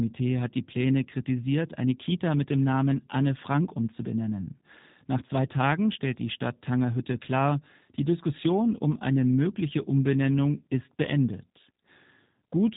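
From start to finish the speech carries plainly audible G.729 codec damage, which fits an 8 kbit/s setting. Each 10 ms frame is rebuilt from a vocal tract filter, a pitch predictor and a few pulses, giving a rough, synthetic texture, and nothing passes above 3.8 kHz.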